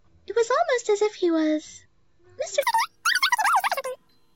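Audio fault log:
2.63–4.36 s, wrong sample rate: From 2.63 s to the end, the sound runs far too fast and too high. Everything moves about 2.76 times quicker, and pitch jumps by about 17.6 semitones, nearly an octave and a half. Speed and pitch shift together because the same samples are simply read out faster, with no conversion. The 2.76 ratio fits audio recorded at 16 kHz being played at 44.1 kHz.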